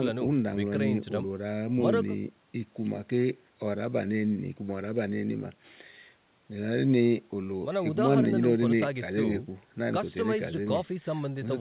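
Nothing stood out on listening to this speech clip, which comes through a call path with the band stopping at about 4 kHz, as fits a G.711 mu-law call at 64 kbps.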